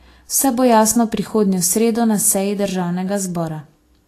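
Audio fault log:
Throughout, Vorbis compression: the speech sounds hissy and grainy, with roughened tones, blurred attacks and nothing above 14.1 kHz. Coarse treble quantisation, likely from a low-bitrate encode near 34 kbps, swaps fine detail for noise. A spectrogram shows a hard 14.1 kHz ceiling and speckled, patchy highs.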